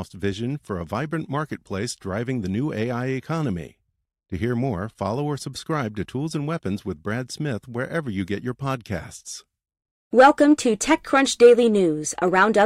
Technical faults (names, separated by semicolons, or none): none